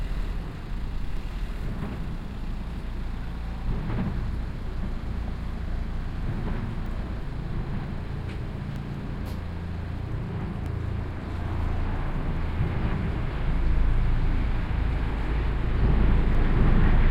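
From 1.17 s to 16.35 s there's a regular click every 1.9 s, about ten in all, likely clock drift buffer slips between two devices dropping or repeating a small block of samples.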